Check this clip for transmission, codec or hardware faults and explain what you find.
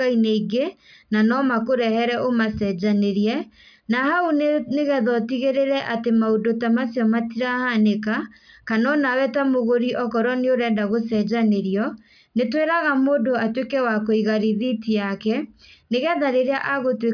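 Nothing in the speech signal points to a transmission, codec or hardware problem: it stays continuous and steady throughout, with no audible interruptions, distortion or level disturbances.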